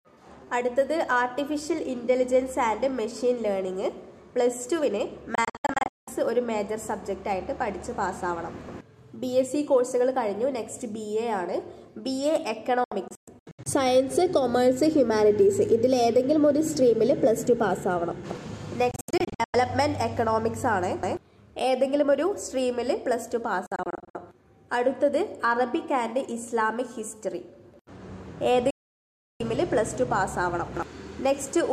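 At 5.35, 12.84, 18.91, 23.66 and 28.70 s the sound drops out, the classic digital broadcast dropout. The receiver is losing frames and muting with a quick 3 ms fade until clean ones return. The first four are clusters of short holes spread over roughly half to eight-tenths of a second, with gaps up to 192 ms. The last is one solid gap of about 0.7 s. Whatever aired during the holes is simply gone.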